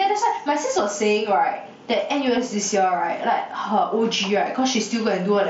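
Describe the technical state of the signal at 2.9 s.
At 2.9 s levels breathe up and down by around 10 dB and the speech sounds squashed, with loud and soft parts pressed close together. This is gain pumping, present throughout the clip rather than only at this moment. The likely cause is microphone gain set far too high, with a fast limiter or compressor clamping down on every loud sound and then releasing in the gaps.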